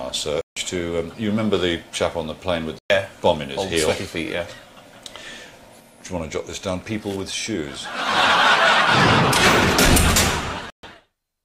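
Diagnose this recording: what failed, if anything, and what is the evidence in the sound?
The sound drops to dead silence three times, at 0.41 to 0.57 s, 2.79 to 2.90 s and 10.70 to 10.84 s, each gap roughly 110 to 150 ms before it resumes. This is likely a Bluetooth stall: delayed packets left the headphone buffer empty until resends arrived.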